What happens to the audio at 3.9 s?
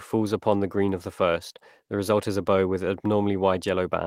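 Nothing goes wrong at 3.9 s; the speech runs on intact through that moment.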